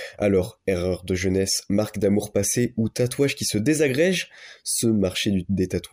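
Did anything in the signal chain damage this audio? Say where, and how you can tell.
No, nothing along the chain seems to have hurt this speech recording, so there's no damaged stage to point to.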